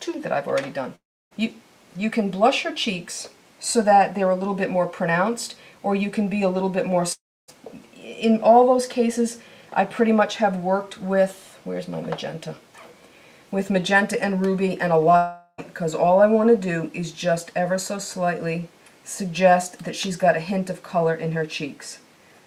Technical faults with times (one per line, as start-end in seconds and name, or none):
0.95-1.33 long network dropout
7.13-7.50 long network dropout
15.16-15.60 long network dropout